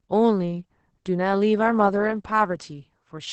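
Throughout, Opus voice compression in SILK mode at what sounds like about 10 kbps strips everything above 8.8 kHz and coarsely codes the rest, leaving speech muffled, hoarse and robotic.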